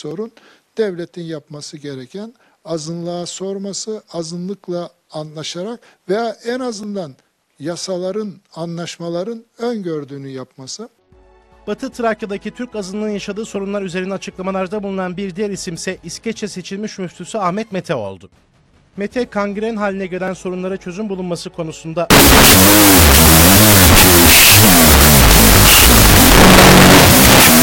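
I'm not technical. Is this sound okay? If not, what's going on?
No. From 22.1 seconds to the end, there's a wrong sample width fault. The audio turns into loud noise, with the real sound buried underneath, playing at half speed and lower pitch. That fits sound saved as 16-bit but read back as 8-bit.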